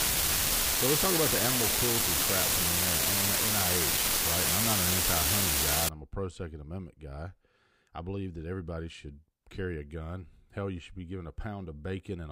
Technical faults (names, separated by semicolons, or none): unreliable data bit